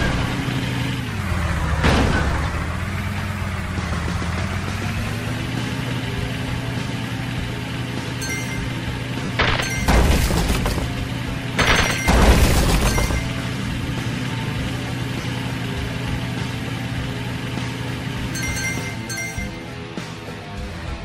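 Lost LE Audio frames occur at 9.25 to 9.29 s, 12.19 to 12.22 s and 15.21 to 15.24 s, gaps of 40, 30 and 30 ms that fit four and then three 10 ms frames. The LC3 decoder fills each gap by repeating the last good spectrum with randomised signs, so instead of a clean cut the sound briefly turns into a noisy, smeared wash before the stream resumes.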